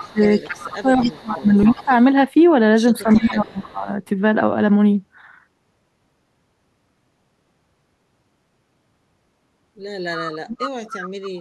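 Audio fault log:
0.00–1.12 s, 1.45–1.85 s, 3.12–3.62 s, 10.15–11.40 s: echo leak. A copy of the speech returns 276 ms late, about 20 dB down, and about 15 dB down in the last stretch. This is likely a far-end echo canceller passing residual loudspeaker pickup. The fixed, distinct delay sets it apart from room reverberation, which smears continuously instead.
0.01–1.91 s, 3.03–3.88 s, 10.35–10.67 s: speech suppressed in double talk. The speech dips sharply while the echo overlaps it, by roughly 25 dB and near 40 dB at 10.4 s, over roughly one and a half seconds, under a second, and a third of a second. The likely cause is the canceller muting both signals. Because these dips follow overlapping talk, they differ from random packet-loss dropouts.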